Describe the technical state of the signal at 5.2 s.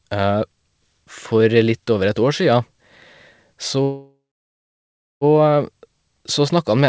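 At 5.2 s the signal is silent, in the last moments of a call audio freeze from 3.83 to 5.24 s: a short fading buzz, then about a second of nothing. Delayed packets likely emptied the jitter buffer, so the audio resumes intact but 1.38 s late.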